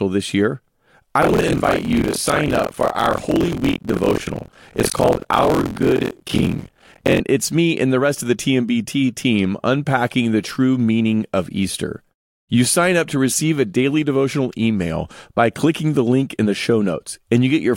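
From 1.21 s to 7.21 s the speech carries a steady robotic rattle at 43.1 Hz, the signature of buffer tearing. The write and read positions in the playback ring buffer have drifted until they cross inside each period, so about 30 percent of every buffer replays audio from roughly 50 ms earlier, bounded by hard joins. The repetition rate fits a 1024-sample buffer, and the buzz tracks the speech, vanishing in gaps.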